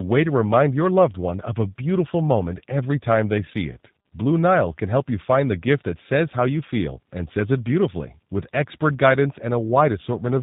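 From start to finish the speech carries tandem speech coding: it has passed through two speech coders in succession, decoded and re-encoded at each link boundary, with the final stage sounding like an 8 kbit/s G.729A coder. Each coder models an already degraded signal, so errors compound. Nothing is present above about 3.8 kHz, giving a muffled, narrowband quality, and the voice sounds rough and warbly, more than a single coding pass would produce.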